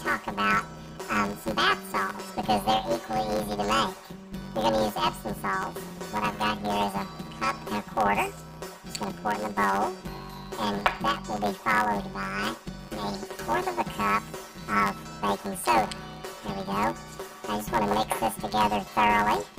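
From start to finish, planar audio read as interleaved: each 10.67 ms block, which fits a 512-sample buffer, plays twice at double speed, left then right. With blocks this short, the result is a robotic buzz at 93.8 Hz rather than a steady octave jump or plain hum.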